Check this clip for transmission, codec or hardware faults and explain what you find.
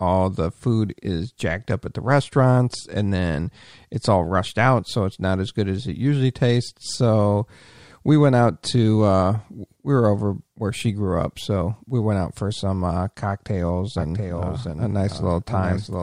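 One fault is present. From 13.98 s, just after "for some uh cocktails", to the end, a doubled audio track appears: a dry copy about 0.7 s late and a few dB quieter, likely from a second, slower capture path.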